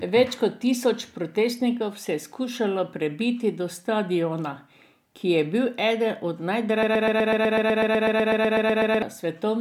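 A speech clip with a broken-record loop from 6.83 s to 9.02 s: one 0.12 s fragment repeats 18 times back to back, replacing whatever should have played. A stalled player or stream is the likely cause. The waveform and spectrogram show identical blocks tiling every 0.12 s.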